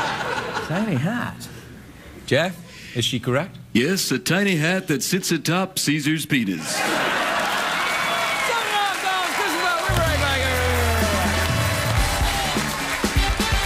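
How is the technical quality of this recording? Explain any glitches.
Nothing in the recording stood out as a technical problem on listening, so there are no glitches to explain.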